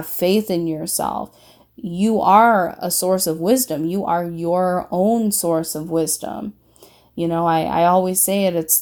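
No audible faults detected.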